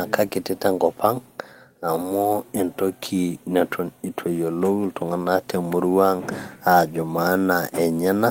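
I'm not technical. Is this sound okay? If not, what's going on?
Yes, this recording sounds fine. Nothing in it points to a technical problem.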